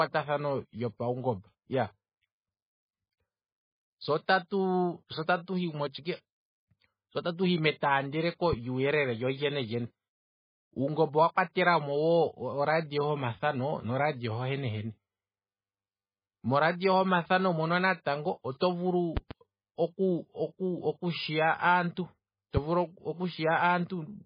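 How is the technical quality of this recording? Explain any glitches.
The recording has heavy coding damage throughout, plus three short glitches: two loud pop events and one pre-echo.

The whole clip carries MP3 compression artefacts, likely from MP3 encoding at a very low rate of around 15 kbps. Weak frequency lines drop in and out, giving the speech a watery, swirly quality. A spectrogram shows nothing above 5 kHz and patchy, flickering bands below it.

A loud pop occurs at 8.53–8.55 s, between "hi metaandeleko" and "lyuu yelele lyolyene lyene", and a double pop at 19.17–19.33 s. The likely cause is a voltage step or pulse added to the signal. Each sits about 10 dB above the speech as a sharp thump. On the waveform these appear as narrow spikes, and on a spectrogram as vertical broadband lines.

Pre-echo appears at 18.59–18.61 s. The codec spread the quantisation noise for a loud attack across its whole block, filling about 24 ms before the onset. 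It is heard as a brief hiss leading into a smeared attack. A spectrogram shows a noise smear just ahead of the onset.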